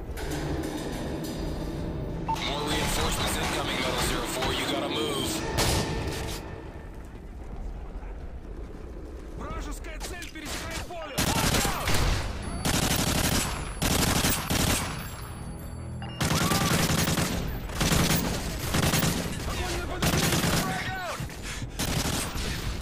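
Nothing here stands out as a technical fault; the audio just runs along without any glitch, dropout or disturbance to point to.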